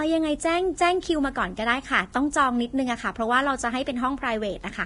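Heavy Vorbis compression runs through the whole speech clip. Nothing sounds above 10.6 kHz. The upper range turns hissy and grainy. Consonant attacks blur. The likely cause is a low-bitrate Vorbis encode, which fits roughly 31 kbps, quantising the treble coarsely.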